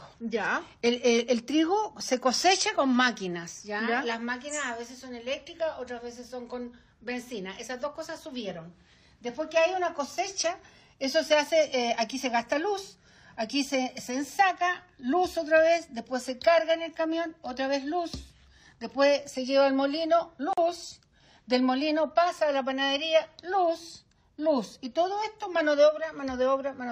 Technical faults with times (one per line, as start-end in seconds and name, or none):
20.53-20.57 gap at a join of encoded pieces